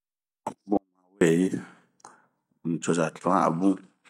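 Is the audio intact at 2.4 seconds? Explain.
Yes, the audio at 2.4 seconds is intact, with no dropout, click, distortion or other technical fault at that moment.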